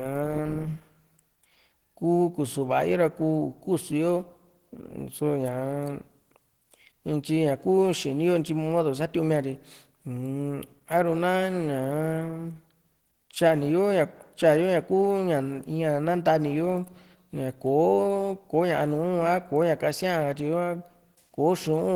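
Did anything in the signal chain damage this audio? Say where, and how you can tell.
Yes. Opus compression runs through the whole speech clip at the codec stage. The sound is plainly grainy, rough and hoarse, yet extends to about 20.1 kHz. That points to a low bitrate near 16 kbps, likely Opus hybrid mode filling starved bands with noise.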